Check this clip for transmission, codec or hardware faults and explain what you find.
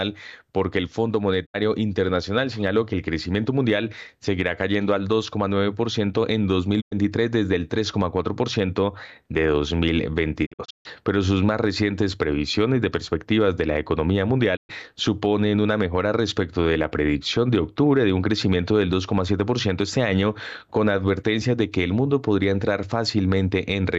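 The speech drops out four times, each a short, quickly faded silence: a digital broadcast dropout. At 1.45 s about 72 ms vanishes. At 6.80 s about 96 ms goes just before "desde el". From 10.45 to 10.87 s there are several holes totalling 264 ms, the longest 144 ms. At 14.55 s about 120 ms is lost between "perspectivas de la economía" and "suponen una mejora respecto". Each time the receiver lost the signal or rejected corrupted frames and muted with a 20 ms fade until clean frames returned. The gaps fit whole 24 ms frames being discarded, and the missing speech is gone.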